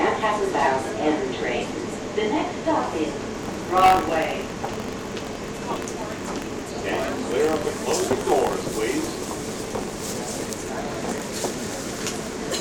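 From 3.33 s on, buffer tearing splices a sliver of tenth-second-old audio into each period: a 46.9 Hz rattle, seen as regularly spaced vertical streaks.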